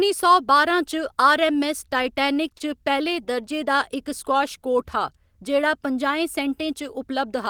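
Between 2.03 and 2.62 s the speech catches and stutters four times, with brief hangs of no more than 20 ms each. These are repeated stalls. Packets arrived late, the jitter buffer ran dry, and the receiver stretched the last sound for about 46 ms in total, so nothing is lost but the flow drags.

From 3.33 to 4.78 s the speech slows to about 95% of its pace while the pitch stays put, and sounds are drawn out. This is a jitter buffer slow-down. Running low on audio, or having just raised its target delay, the receiver repeated single pitch periods to build a reserve, adding 72 ms.

From 6.97 s to 7.49 s the speech hurries to about 106% speed at unchanged pitch. This is a jitter buffer speed-up. Holding more audio than its target, the receiver trimmed short pitch-period pieces, around 40 ms in all, to bring the delay back down.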